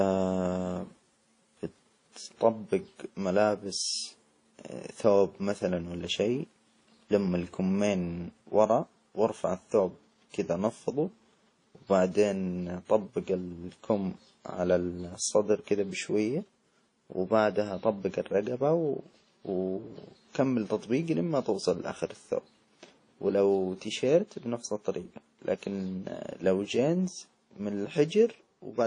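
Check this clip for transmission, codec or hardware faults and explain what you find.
There's one problem, and it runs the whole length of the speech: the coding damage is plainly audible, and it most likely comes from WMA compression. Nothing gets through above about 10.1 kHz, which fits a low bitrate around 32 kbps. WMA is a transform codec, so its quantisation noise is spread across whole blocks tens of milliseconds long, and weak spectral lines are dropped entirely. That gives you the ringing, washy texture and a hiss that swells and fades with the speech.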